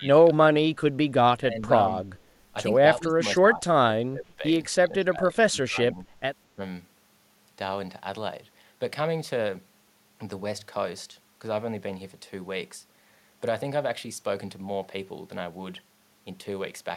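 An echo canceller likely confused the talker with far-end echo during double talk, producing speech suppressed in double talk: the voice dips by roughly 15 to 25 dB at 0.0–0.41, 1.37–1.71, 2.82–3.22, 3.39–3.75, 3.96–4.43, 4.81–6.06 and 6.55–6.61 s.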